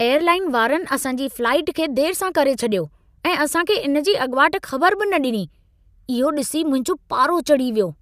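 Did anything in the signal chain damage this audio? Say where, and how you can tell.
No, nothing in the signal chain damaged this audio.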